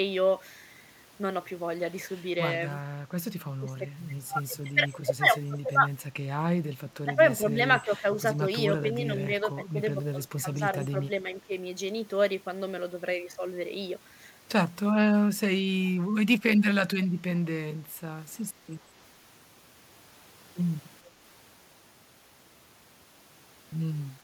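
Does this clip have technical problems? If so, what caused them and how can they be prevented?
Yes. The speech dips in level at 3.59–3.87, 5.51–5.71, 7.05–7.14, 7.87–8.06, 8.81–9.96 and 10.41–11.52 s. The first dip is deepest, around 20 dB. Later ones are milder. This is likely speech suppressed in double talk. An echo canceller could not separate the talker from loudspeaker echo while both sides spoke, so it turned both down. Using headphones, or a canceller tuned to handle double talk, prevents it.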